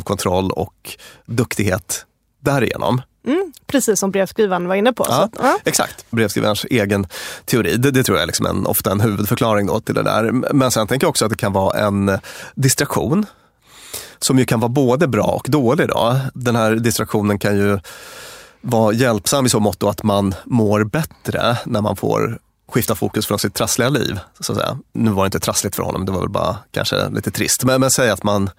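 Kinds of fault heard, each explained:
Periodic USB or driver dropouts: a recurring stall on the USB bus or in the audio driver skips a tiny slice of audio, roughly a tenth of a millisecond, every 0.5 s from 0.42 s to 28.38 s, giving about fifty evenly spaced ticks heard only during speech.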